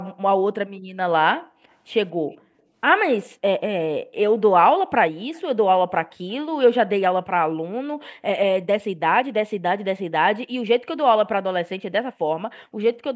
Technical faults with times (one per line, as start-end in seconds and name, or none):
1.70-1.74 echo leak
2.32-2.37 echo leak
5.34-5.42 echo leak
6.10-6.14 echo leak